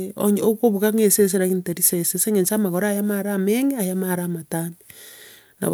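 An underrun with held sample occurs at 0.98 s in this speech clip. The output buffer briefly ran dry and the converter held its last sample value instead of receiving new data, so the waveform sits flat for about 0.73 ms, which fits a gap of roughly 32 samples. The hold is very short, and well under a millisecond of live audio went missing during it.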